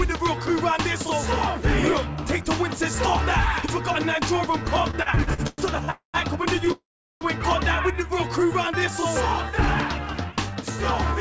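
From 4.91 to 5.91 s, packets kept arriving late, draining the jitter buffer eight times. This causes repeated stalls (stutter): each gap, the longest 108 ms, is bridged by stretching the last sound, so roughly a third of that second is filler and the audio drags and judders.

At 5.91 s the stream halts for 231 ms, a call audio freeze likely caused by packets held up in transit. The last sound continues briefly, then 130 ms of silence follows before the audio resumes where it stopped.

A second freeze from 6.72 to 7.24 s behaves the same but runs longer. The 490 ms hold fades into about 390 ms of silence, adding that much delay without losing anything.

From 9.90 to 10.64 s a jitter buffer speed-up trims the backlog. The receiver cuts out short pitch-period slices, about a tenth of a second in total, so the sound plays at 111% speed with unchanged pitch and comes across as hurried. Across the clip, the call path's G.722 coding leaves nothing above 8 kHz.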